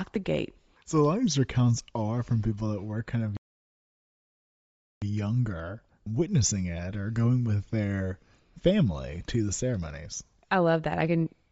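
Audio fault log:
throughout Bluetooth LC3 compression: likely a low-bitrate LC3 link, near 32 kbps in short frames, thinning the upper spectrum and filling it with noise, giving the speech an audibly breathy, grainy edge.
3.37–5.02 s playback stall: the player likely starved of data or was blocked, so output falls silent for about 1.65 s mid-phrase before the speech resumes.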